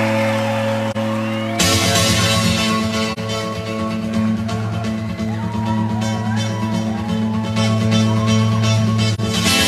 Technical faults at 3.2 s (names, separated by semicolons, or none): AAC frame loss with muting